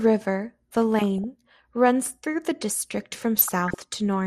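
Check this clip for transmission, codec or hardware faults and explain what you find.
The speech has two faults: codec damage throughout and two bursts of burbling.

MP2 compression is heard from start to finish. The sound is dull and gurgling. Starved sub-bands drop out. This likely comes from a low bitrate, perhaps around 80 kbps.

DAB burbling occurs from 0.98 to 1.24 s and from 3.16 to 3.80 s. Bit errors slip past correction. Wrong samples put short blips of noise into single sub-bands.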